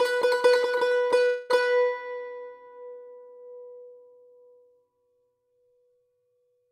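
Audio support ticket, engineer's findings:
Call audio freeze in the music, 1.25 to 1.63 s. The last sound is stretched into a fading buzz or hiss rather than going silent. About 0.24 s is filled in. Nothing is lost: playback resumes where it stopped, now 244 ms later. Likely a network hold-up on the receive path. The jitter buffer ran dry, so the decoder kept extending the previous sound until packets arrived.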